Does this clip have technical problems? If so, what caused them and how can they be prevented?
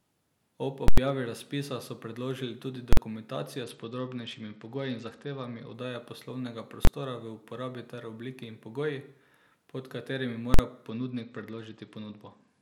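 Yes. The first problem is invalid numbers at full scale, heard as loud pops with dead silence between them at 0.88 to 0.98 s, 2.93 to 2.97 s and 10.54 to 10.59 s, and as a single bang at 6.85 s. A calculation produced infinite or invalid values that were pinned to maximum amplitude for a whole processing block. The lengths fit blocks of 4096, 2048, 1024 and 2048 samples. Guarding against division by zero and replacing non-finite values with silence before output prevents it.

The second problem is a Bluetooth SBC bit pool drop. From 3.64 to 5.74 s, and again from 10.90 s to the end, the speech turns dull with the treble gone and a gritty noise underneath. A congested wireless link made the phone cut the SBC bit pool, which fits a drop from 31 to about 11, or roughly 83 kbps. The highest sub-bands then received few or no bits and the rest were coarsely quantised. Reducing radio interference and distance, or using a higher-quality codec, prevents it.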